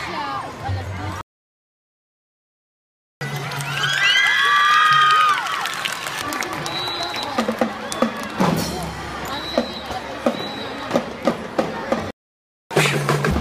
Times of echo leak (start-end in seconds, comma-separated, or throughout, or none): none